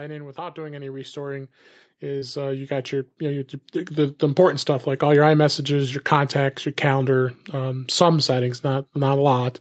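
From 0.34 s to 4.64 s the level climbs steadily by about 16 dB as automatic gain rising lifts a signal it judged too quiet. Speech and background noise swell together over those four seconds rather than settling at a fixed level.

Inside that rise, at 2.19 to 2.24 s, a short concealed packet loss occurs. Roughly 20 ms of audio failed to arrive, and the receiver bridged the gap by extending the preceding sound for about 22 ms before blending back. The result is a brief smear in the speech, heard through a call path whose bandwidth stops at 8 kHz.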